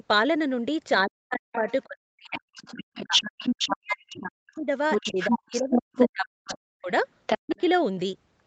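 From 1.06 to 7.58 s the speech repeatedly dips and breaks off, by up to about 40 dB, for roughly four seconds in total. This is speech suppressed in double talk, likely an echo canceller ducking the talker while the other side spoke. The waveform shows abrupt gaps and sunken stretches, and the spectrogram shows harmonics vanishing in blocks.

A second voice also comes through, the other side's voice leaking through, likely residual loudspeaker echo. It first appears as a faint scrap from 1.52 to 1.73 s, well below the talker. It returns at about the talker's own level from 2.31 to 6.54 s and from 7.27 to 7.61 s. On the spectrogram a separate harmonic pattern overlaps the talker's, and both stop at 8 kHz, where the call path cuts off.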